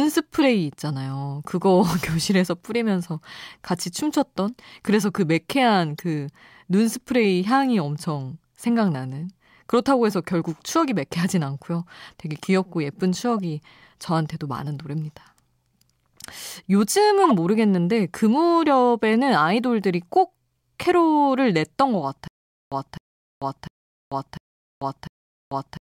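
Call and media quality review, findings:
Corrupt frame decoded: short chirps and blips in the speech at 0.42, 5.98–6.03, 8.68, 13.37 and 17.24–17.32 s. Decoder is playing damaged compressed frames, so energy lands at the wrong frequencies. Each hit covers a few frames; the last spans several.

Stutter with silent gaps: from 22.28 s to the end, a 258 ms chunk of speech replays with about 441 ms of digital silence between, repeating every 699 ms, five times. Likely a stalled player or stream re-serving its last fragment, then running dry. The audio that should have played there is lost.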